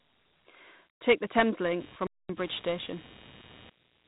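From the start the speech carries the gritty hiss of Dialogic VOX ADPCM, which fits a 32 kbps stream. The 4-bit coder can't track the waveform closely, so grain rides along with every syllable, and nothing comes through above about 3.8 kHz, giving that narrow phone-menu sound.

At 1.51 s computer activity noise comes in and stays to the end: a buzzy, chirping scratch pulsing at around 100 Hz, roughly 25 dB under the speech. It's the machine's load changes leaking into the audio ground, so it follows the computer's activity rather than the speech.

Then from 2.07 to 2.29 s there's a playback stall. The speech just cuts out mid-flow for about 226 ms of silence and then carries on. The likely cause is the player running dry of data or its thread getting held up until it caught up.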